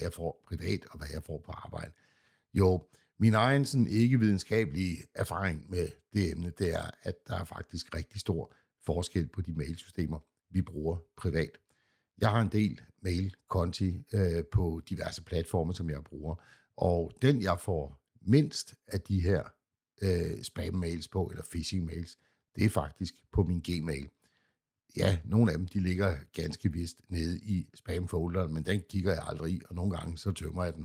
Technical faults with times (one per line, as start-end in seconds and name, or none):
none